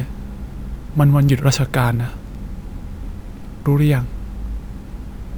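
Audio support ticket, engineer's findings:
Imaging from sample-and-hold upsampling throughout: metallic fizz 12–24 kHz, about 28 dB below speech. Sample repeating, 24 kHz to 48 kHz, no smoothing filter. Unlike hiss, the fizz follows speech level and vanishes in pauses.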